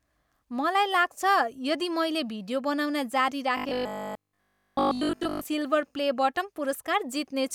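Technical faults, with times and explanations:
3.57–5.45 s robotic sound from repeated short buffers: new audio likely arrived too seldom, so a short buffer was replayed in place of most of the real audio. The speech becomes a rigid, metallic 50 Hz buzz, which fits a 20 ms buffer.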